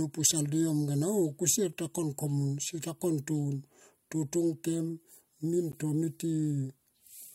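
At 1.73 s the speech drops out for a hard-edged silence of about 3.4 ms, and at 5.72 s a second, longer hole of about 12.2 ms follows, four seconds later. Both are gaps between stream segments: the timestamps of consecutive 4-second segments don't quite meet, so the player pads the mismatch with silence. No audio goes missing; the sound simply pauses abruptly and resumes where it left off.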